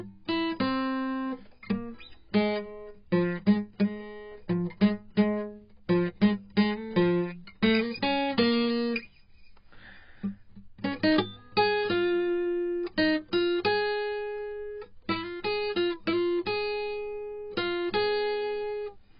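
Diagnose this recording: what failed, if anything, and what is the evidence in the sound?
The failure is at the codec stage, most likely heavy AAC compression. For the whole length of this music there is nothing above 5.2 kHz, so the top end sounds dull and closed in. Sustained tones warble and smear, and bright passages turn fizzy. That fits AAC-LC starved at a very low bitrate, around 16 kbps. The encoder pulled its cut-off right down, left holes across the remaining spectrum, and patched some bands with substitute noise instead of the real content.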